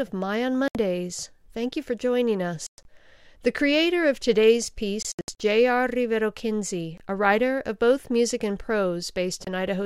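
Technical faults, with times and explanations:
0.68–9.47 s, Bluetooth dropout: the wireless link likely failed to deliver audio packets in time, so the output cut to silence with abrupt or briefly faded edges. The gaps are 70 ms at 0.68 s, 140 ms scattered over 2.67–2.85 s after "you for joining", 210 ms of short holes across 5.02–5.40 s after "creator of today's", and 23 ms each at 6.98 s (before "a writer of both") and 9.45 s. The steps of about 23 ms suggest whole lost packets. After each gap the sound picks up later, as if it had kept playing.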